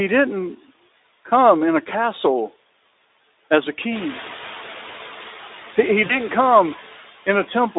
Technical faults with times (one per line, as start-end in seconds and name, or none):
0.00-7.79 noise suppressor artifacts
6.05-6.18 VoIP packet loss concealed by the speech codec